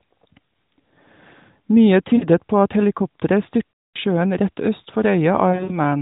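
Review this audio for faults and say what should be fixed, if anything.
Lost AMR speech frames at 2.16–2.27 s, 3.72–3.97 s (about 220 ms, fading toward silence) and 5.50–5.78 s: the decoder repeats the last good frame's settings at falling gain. The sound smears and fades instead of clicking or cutting off abruptly, as a plain dropout would.

Stronger error protection on the radio link would prevent these losses.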